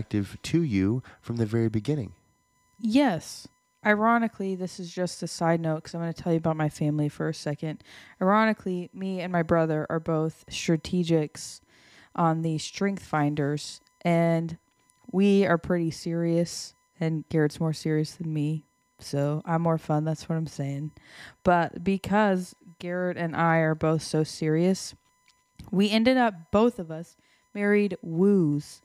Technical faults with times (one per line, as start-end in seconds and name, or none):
0.00-28.85 USB whine